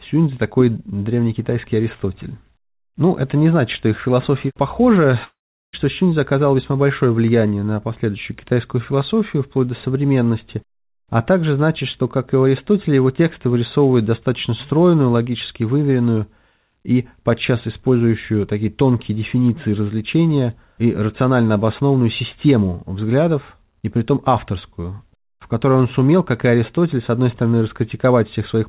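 Between 5.24 and 5.75 s the audio stops and a fading concealment buzz fills the gap before near-silence; a long network dropout is the likely cause, with half a second lost. The call path shows nothing above 4 kHz, which fits G.711 A-law at 64 kbps.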